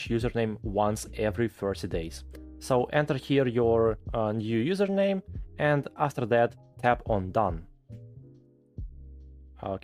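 Nothing goes wrong anywhere in this one, so there's no fault to point to at any moment.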